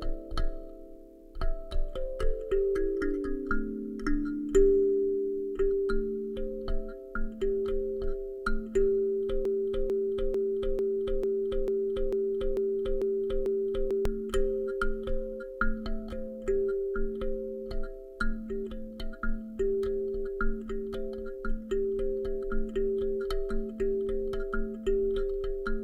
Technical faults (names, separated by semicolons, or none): broken-record loop